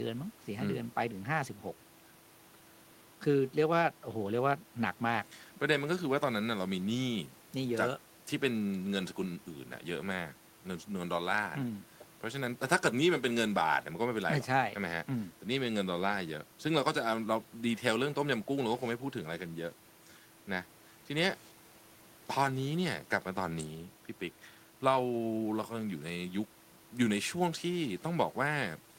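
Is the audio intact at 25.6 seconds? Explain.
Yes, the audio is intact at 25.6 seconds, with no fault at that moment.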